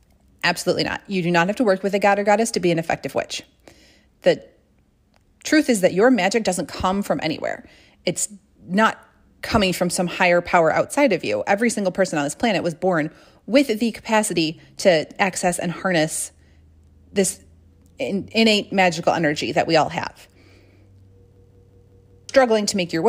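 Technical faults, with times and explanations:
21.36 to 22.29 s, system hang loop: the speech freezes into a machine-gun stutter as one slice of about 186 ms repeats exactly five times at about 5.4 per second, which fits an 8192-sample ring buffer replayed while the system stalled, and about a second of audio is lost. Unlike dropout gaps or concealment, which fill with silence or smeared, varying sound, every repeat here is sample-identical and the loop ends abruptly.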